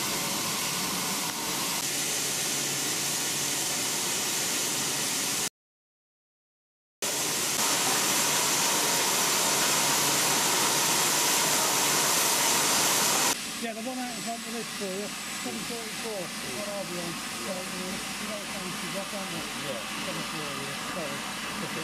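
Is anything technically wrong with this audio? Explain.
Yes. From 5.48 to 7.02 s there is an audio dropout to silence: the input was likely lost while recording continued, so about 1.5 s of sound vanishes into dead silence with no room tone.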